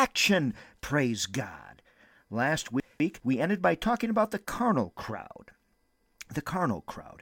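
At 2.8 to 3.2 s there's a short stretch of chunks out of order: one 200 ms chunk landed a chunk late and plays after the one that should follow it. Nothing goes missing, but the speech gets scrambled for a moment, with three hard joins.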